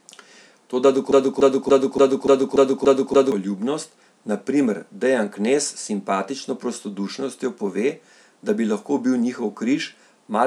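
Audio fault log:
1.11–3.32 s broken-record loop: one 289 ms slice of speech repeats eight times back to back, likely a stalled stream resending its last buffered fragment.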